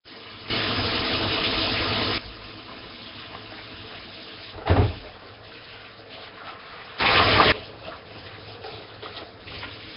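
Throughout, the sound has a rough, hissy halo and a smeared, underwater character, with nothing above 5.3 kHz, which points to heavy, likely Nellymoser compression at a low bitrate near 22 kbps. From 0.50 to 2.18 s, and again from 7.00 to 7.52 s, sound and background noise leap up together by about 16 dB and then about 20 dB, switching abruptly rather than ramping, a sudden gain jump.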